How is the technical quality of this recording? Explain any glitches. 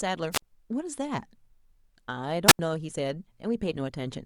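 The recording has two short wireless microphone squelch dropouts in the speech. At 0.31–0.42 s and again at 2.47–2.59 s, the radio link fades, the receiver's squelch cuts the output, and you get a near-silent hole of about 50 ms, then about 78 ms, before it recovers.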